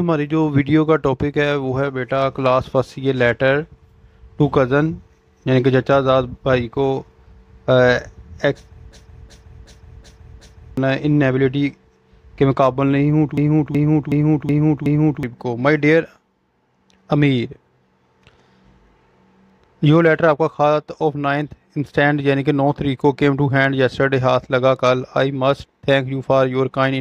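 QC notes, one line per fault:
8.92–10.77 s and 13.38–15.23 s, system hang loop: a 0.37 s slice repeats exactly five times at 2.69 Hz, fitting a 16384-sample ring buffer replayed while the system froze. The result is a slow machine-gun stutter rather than a buzz, and about two seconds of audio is lost each time. Unlike a dropout or glitch, each repeat is identical.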